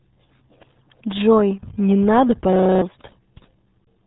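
From the first moment the speech is muffled and gargly, with a watery, smeared texture on every syllable and no content above 3.8 kHz, so sibilants and breath noise are gone. This is the RealAudio 14.4 codec, a dial-up-era speech coder, here at heavy damage. The bandwidth and coarseness point to an 8 kbit/s stream. At that rate the encoder keeps only a rough model of the voice and discards the upper band entirely.

From 2.53 to 2.82 s the sound collapses into a steady, rough buzz at about 31 Hz, with one fragment repeating roughly nine times. This is a system hang loop. The computer or driver stalled while the audio hardware kept replaying the same 32 ms chunk of its ring buffer, which fits a 512-sample buffer. The fresh audio that should have played there, about a third of a second, never arrives.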